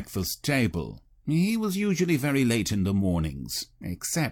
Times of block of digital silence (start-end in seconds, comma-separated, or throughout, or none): none